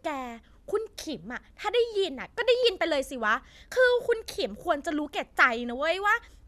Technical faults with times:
none

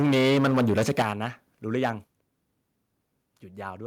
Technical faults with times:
0.00-1.25 microphone overload
1.02 microphone volume stepped down
1.74-1.90 microphone overload
2.04 microphone volume stepped down

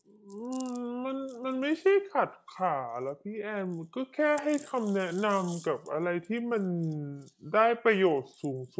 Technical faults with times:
0.00-8.79 wrong sample rate

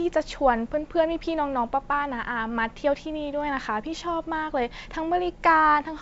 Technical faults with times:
none

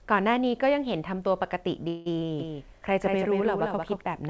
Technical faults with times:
1.88-2.08 call audio freeze
2.40-4.02 doubled audio track

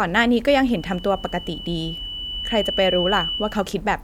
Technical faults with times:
0.70-3.78 loudspeaker feedback squeal

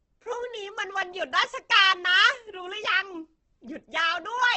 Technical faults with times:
0.00-4.57 Opus compression

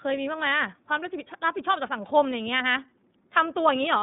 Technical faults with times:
0.00-4.02 iLBC codec

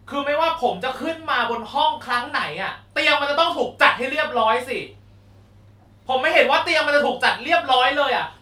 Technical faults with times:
none

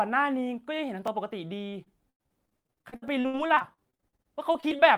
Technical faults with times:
1.07 overlapping chunks
1.70-4.80 repeated packet loss (robotic sound)
3.08 overlapping chunks

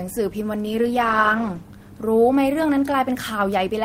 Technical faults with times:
0.65-1.75 call bitrate drop

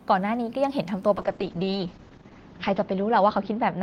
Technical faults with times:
1.18-3.82 call bitrate drop

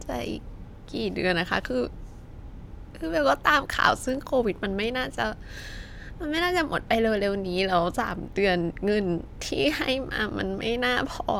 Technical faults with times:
none

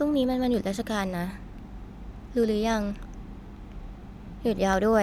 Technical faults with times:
0.14-4.93 periodic USB or driver dropouts

